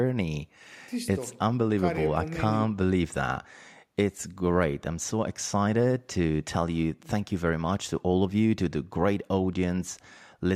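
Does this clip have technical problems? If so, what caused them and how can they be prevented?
No technical faults are audible.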